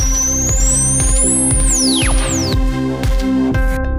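From 0.6 to 2.54 s a doubled audio track is heard. A second full-band copy trails the original by roughly 0.7 s, about 5 dB quieter. It has no decay or room colour. It cuts in and out abruptly, likely from a slower second capture path.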